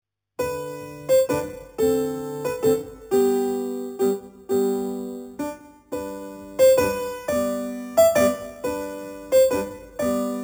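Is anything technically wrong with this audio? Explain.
Yes. Throughout, there is imaging from sample-and-hold upsampling: the audio was raised from 8 kHz to 48 kHz by repeating samples unsmoothed, leaving mirrored spectra about 18 dB down, the first at 4 to 8 kHz. This is heard as metallic fizz, seen as staircased waveform and mirror-image spectrogram bands.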